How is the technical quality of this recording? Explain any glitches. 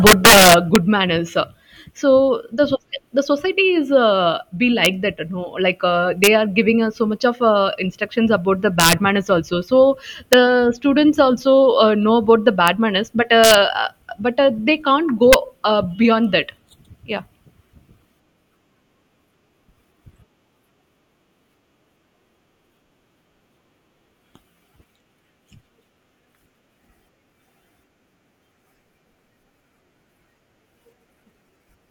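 Integer overflow damages the speech recording at eight points. The loudest peaks crack hard at 0.07 to 0.76 s and 8.80 to 8.93 s, driven about 7 dB and about 5 dB past the limit. Briefer cracks come at 4.85, 6.24 to 6.27, 10.33, 12.68, 13.44 to 13.54 and 15.33 s. There the signal sits at or about 1 dB over. Peaks were not held at the maximum integer. They wrapped to the opposite sign, producing violent snaps far harsher than clipping.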